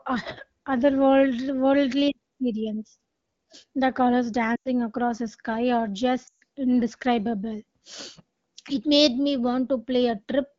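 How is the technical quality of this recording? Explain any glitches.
The recording, carried over an AMR wideband (HD Voice) link with light coding, has two glitches from lost AMR speech frames.

At 4.55 to 4.68 s, just before "across the sky are", and at 6.27 to 6.43 s, just after "across the sky are", about 100 ms and 140 ms of speech frames were lost. The decoder repeated the last good frame with falling gain, so the sound smears and fades. On a spectrogram this shows as flat, repeated harmonics that dim into a gap, and on a waveform as a shrinking envelope.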